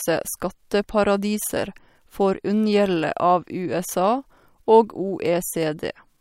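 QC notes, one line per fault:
No faults heard in this recording.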